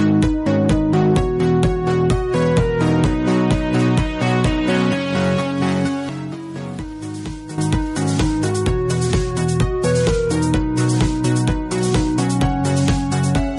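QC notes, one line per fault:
6.09 to 7.58 s, sudden gain jump: the digital gain was likely switched with no ramp, dropping about 11 dB from one sample to the next and later restoring it just as abruptly, so the sound and its background noise fall and return in level together.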